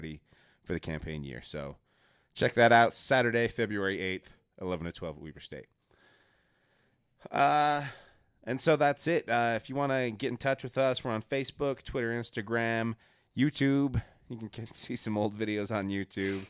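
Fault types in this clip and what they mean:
No technical faults can be heard in this speech recording. There is nothing in it to list by type.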